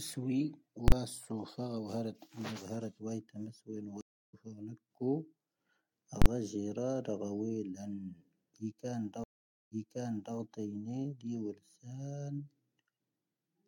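Invalid numbers at full scale occur at 0.88 s and again at 6.22 s in this speech recording. In each case a 40 ms block of infinite or invalid values is clamped to the maximum level, heard as a harsh pop at each edge with nothing between. Stream reconnect faults occur at 4.01 s and 9.24 s. At 4.01 s, 0.32 s of silence is followed by speech resuming about 0.4 s further along. At 9.24 s, 0.48 s of silence is followed by speech resuming 0.64 s earlier, replayed from a resent burst after the decoder restarted mid-stream.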